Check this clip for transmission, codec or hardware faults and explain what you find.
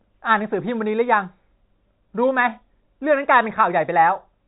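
No transmission faults found.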